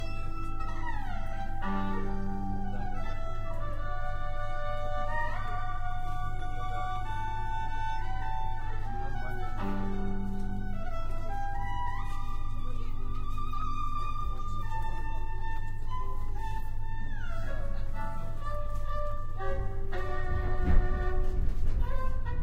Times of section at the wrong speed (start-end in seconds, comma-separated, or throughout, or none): none